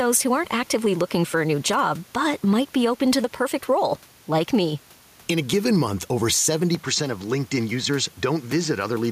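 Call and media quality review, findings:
Gain pumping, whole clip. Gain swings about 5 dB; the room noise sits about 33 dB down. Likely an overdriven input gain with a fast limiter. Unlike a noise gate, the gaps fill up rather than drop to silence.

Input switched to a poorer device, 6.75 s to end (9.12 s), right after "a given month over". The tone turns dull and boxy with nothing above 7.8 kHz, level drops about 5 dB, and a new noise floor sits about 35 dB down. No gap at the switch. Likely cause: the OS rerouting capture to another mic or headset profile. A codec bandwidth drop would narrow the band without changing level or noise floor.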